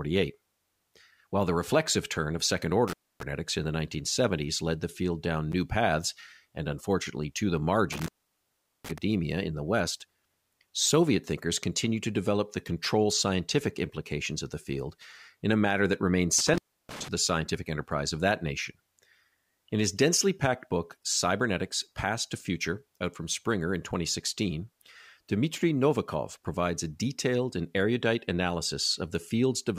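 Speech that drops out three times with crackle at each edge: at 2.88 s after "reflexive turn of second" (about 0.27 s open), at 7.92 s after "and unfortunately to the" (about 0.76 s), and at 16.39 s after "a matter that remained" (about 0.31 s). This is intermittent contact, a loose plug or cable briefly breaking the signal path.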